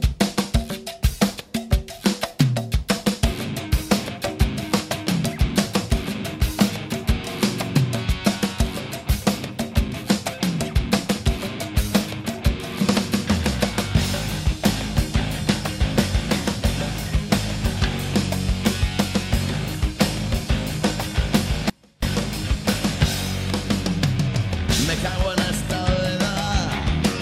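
At 21.70 s the sound abruptly collapses to a faint trace roughly 30 dB below its normal level, then snaps back at 22.02 s, about 325 ms later. This audio dropout to a faint residue likely came from a brief signal loss while the downstream path stayed live.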